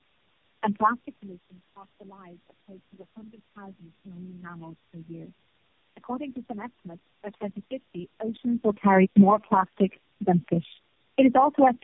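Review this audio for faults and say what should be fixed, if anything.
Tandem speech coding throughout: the speech is rough, muffled and warbly, which points to several narrowband codecs such as AMR-NB in series, each re-encoding the previous one's damage. A spectrogram shows nothing above 3.6 kHz, with smeared, blotchy harmonics. Prevent it by keeping one codec end to end, or passing the encoded stream through transcoder-free between links.

Automatic gain falling from 8.33 to 9.5 s: the gain control judged the input too loud and pulled the level down by about 10 dB. The waveform envelope and background shrink together. Prevent it with a slower, less aggressive AGC or a properly set input level.

Automatic gain rising from 9.42 to 9.91 s and from 11.52 to 11.78 s: the gain control judged the input too quiet and lifted it by about 5 dB, then about 3 dB. The waveform swells, with the noise floor rising too. 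Prevent it by fixing the gain or narrowing the AGC's adjustment range.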